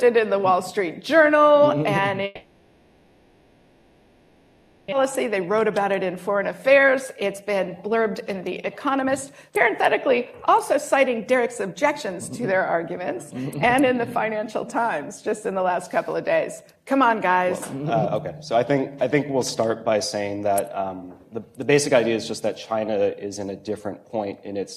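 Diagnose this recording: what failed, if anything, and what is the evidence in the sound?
Long network dropout, 2.25 to 4.94 s. The stage is the network, likely a long packet outage. For the whole 2.7 s the receiver's concealment carries the last sound on as a fading buzz that settles into a low steady noise, with no true silence. About 1.6 s of the original audio is simply gone. When sound resumes it continues from a later point, and the playout delay has grown by roughly a second.

Jitter buffer speed-up, 5.03 to 10.15 s, 10.57 to 15.70 s, and 16.76 to 17.29 s. This is a receive-buffer stage. After the outage, the delayed audio arrived in a burst and overfilled the jitter buffer. To drain it, the receiver repeatedly cut out pitch-period-sized pieces. The sound runs fast at unchanged pitch: 112% in the first stretch, removing roughly 0.7 s, then 107% in the second (about 0.4 s) and the brief third (about 50 ms).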